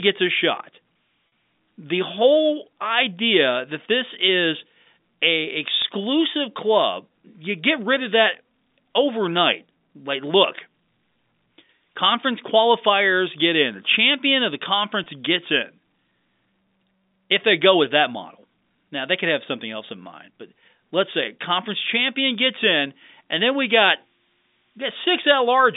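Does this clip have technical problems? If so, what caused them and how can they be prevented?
Yes. There's packet loss with pitch repetition at 1.28 to 1.32 s right after "a shot", at 5.82 to 5.84 s, and at 15.04 to 15.06 s after "champion of the". The receiver fills each gap by looping the last pitch period, so you hear a brief buzzy hold. Dropouts of 40 ms and 20 ms fit losing two packets and one packet. To prevent it, improve network stability or add jitter buffering and forward error correction.

From 23.67 s, just after "in and then we", to the end there's a switching supply whistle. It's a high tone wandering between 5.3 and 6.3 kHz, about 25 dB below the signal, from a power supply running in an audible mode. Since the telephone band cuts off well below that, it's getting in after the codec, likely on the playback side. Swapping or filtering the offending supply and keeping audio gear on clean power should fix it.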